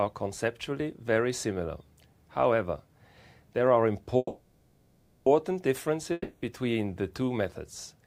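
From 4.17 to 5.28 s a call audio freeze fills about 1.1 s with fading buzz or hiss, likely from delayed packets; playback resumes where it stopped, nothing lost, just later. From 6.12 to 6.44 s a long network dropout likely causes a similar 0.3 s fade, but here that 0.3 s of sound never returns, so playback resumes further on.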